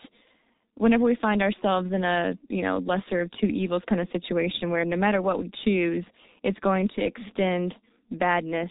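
From the first moment to the last, the speech carries heavy G.723.1 codec damage. Nothing gets through above about 3.8 kHz, so it's muffled and hoarse. Consonants smear because the coarse frames update the voice model slowly. The damage fits a rate of around 6.3 kbit/s.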